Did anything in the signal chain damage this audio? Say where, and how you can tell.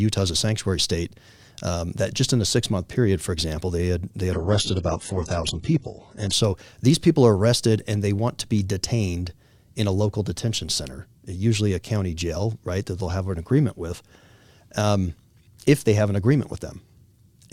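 Yes. From 4.33 to 6.33 s the speech drops to an adaptive stream at a lower bitrate, a codec and network stage fault. The change is abrupt in both directions with no gap. The top end collapses above 11.1 kHz, which fits a fall from roughly 96 kbit/s AAC to a very low-rate HE-AAC rendition while the connection slowed. On a spectrogram a flat-topped shelf appears at 11.1 kHz, with patchy, replicated-looking upper bands inside that window.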